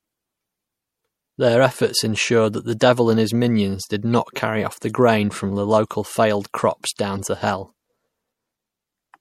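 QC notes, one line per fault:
throughout: MP3 compression. The treble sounds cut off and the sound has a watery, swirly texture, likely from a lossy MP3 encode at a low rate that fits 64 kbps. Weak frequency lines drop in and out between frames, and consonant attacks smear.
4.14 and 7.17: corrupt frame decoded. Damaged compressed frames were decoded and played, so energy landed at the wrong frequencies and produced short chirps or blips. The first, after "and his minions did", peaks at about -25 dBFS; the second, after "from local failed crops", peaks at about -30 dBFS.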